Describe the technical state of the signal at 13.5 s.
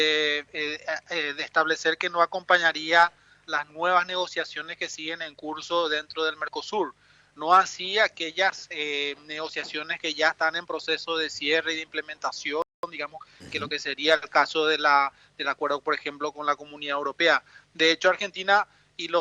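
At 13.5 s the signal is inside a time-compressed catch-up running from 12.83 to 13.67 s. After a stall, small segments are cut out and cross-faded to clear the backlog, so the sound plays about 1.25 times faster at unchanged pitch, hurried.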